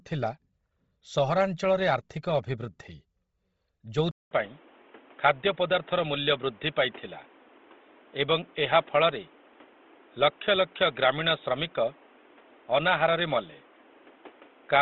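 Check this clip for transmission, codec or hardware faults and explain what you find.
Two faults are present: coarse codec damage across the whole speech clip, and a drop to a narrower, noisier input from 4.11 s to the end.

Bluetooth LC3 compression runs throughout. Nothing reaches above 7.7 kHz, and the upper band sounds grainy and breathy, filled with noise rather than real detail. This likely comes from LC3 at a low rate, around 24 kbps with 7.5 ms frames, zeroing spectrum. The noise-filled treble separates it from a plain low-pass.

Input switched to a poorer device at 4.11 s. A 200 ms silence is followed by audio capped at 3.8 kHz, boxy and dull, with new background noise about 30 dB below the speech and little level change. The likely cause is a change to another microphone or headset call profile. Unlike gradual dulling, it changes abruptly at a gap.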